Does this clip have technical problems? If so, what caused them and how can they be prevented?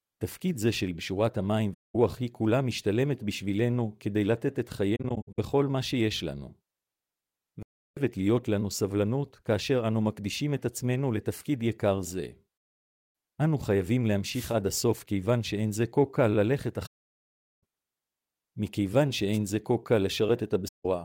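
Yes. The speech in this clip has two kinds of fault.

AAC frame loss with muting occurs six times: 1.73 to 1.95 s, 4.96 to 5.39 s, 7.63 to 7.98 s, 12.56 to 13.14 s, 16.86 to 17.62 s, and 20.68 to 20.86 s. The gap near 5 s is broken up into short holes, the longest roughly 70 ms, rather than being one continuous gap. Each hole is a soft-edged silence. The decoder set the spectrum of the missing frames to zero, and the overlapping windows fade the sound out and back in. The step lengths fit frames of about 21 ms. Protecting the stream with retransmission or forward error correction, and using a decoder that conceals lost frames instead of muting them, would prevent these holes.

A wireless microphone noise hit occurs twice: 14.27 to 14.57 s, and more briefly at 19.32 to 19.38 s. Each is heard as a short swish of static over the speech. The analogue FM radio link faded as reflected signals cancelled at the receiver antenna, so receiver noise rose above the weakened carrier. 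A true diversity receiver, better antenna placement with a clear line of sight, and a shorter transmitter-to-receiver distance would prevent these dropouts.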